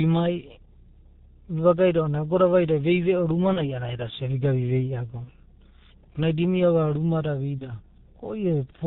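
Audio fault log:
throughout G.723.1 codec: the speech passed through this narrowband telephony codec at 6.3 kbit/s, stripping everything above 4 kHz and leaving a muffled, hoarse voice with smeared consonants.
3.53 to 3.81 s VoIP packet loss concealed by the speech codec: after "vaida vei veo ruma" one 30 ms frame was lost; the decoder extrapolated and faded it, leaving a buzzy or noisy stretch and weak or distorted speech.
5.24 to 5.30 s VoIP packet loss concealed by the speech codec: another single 30 ms frame went missing, and the decoder's guessed replacement sounds briefly buzzy or noisy and weak before recovering.
7.59 to 7.64 s VoIP packet loss concealed by the speech codec: just after "ruma da" one 30 ms frame dropped, and the decoder filled it with a fading, buzzy or noisy stretch of the preceding sound.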